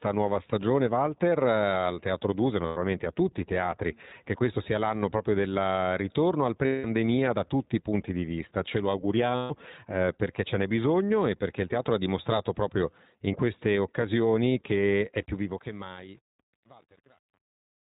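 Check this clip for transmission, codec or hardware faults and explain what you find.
Three kinds of fault are present: iLBC codec coloration throughout, three dropouts from lost iLBC frames, and truncation distortion on the closing fade.

iLBC codec: Across the whole speech clip the band stops at 4 kHz, and the voice sounds clear but slightly rough and synthetic. iLBC codes each frame's excitation independently of the previous frame. The damage is plainly audible and fits the 15.2 kbps mode with 20 ms frames, which accounts for the dull, narrowband, somewhat processed quality.

Lost iLBC frames: Gaps of 100 ms at 2.66 s, 180 ms at 6.66 s and 140 ms at 9.36 s fit runs of five, nine and seven 20 ms frames going missing in transmission. Each time, the decoder fills the hole by repeating the last pitch cycle blended with noise, so the sound becomes a held, buzzy vowel. Because iLBC frames decode independently, normal speech returns almost immediately after each gap.

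Truncation distortion on a fade: From 15.19 s to the end, the fade-out is processed at too few bits without dither, which points to roughly 8-bit resolution. As the level approaches the smallest quantisation step, the waveform breaks into coarse square steps. The result is gritty from 15.62 s onward.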